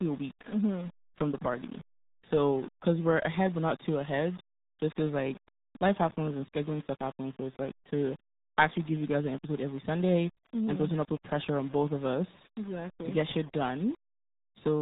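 Speech runs through the whole clip with a grainy, gritty distortion that tracks the signal. Quiet stretches and word tails sputter between coarse steps or drop to silence, and the error sits around 20 dB below the speech. The likely cause is low bit depth without dither, rounding to about 7 bits. A waveform would show visible stair-stepping, and a spectrogram a noise haze that rises and falls with each syllable. Throughout, the speech is also muffled and gargly, with heavy coding damage typical of the RealAudio 14.4 codec at what sounds like 8 kbit/s. On a spectrogram, nothing appears above a hard ceiling at 3.8 kHz, and the harmonics below it look smeared and blotchy.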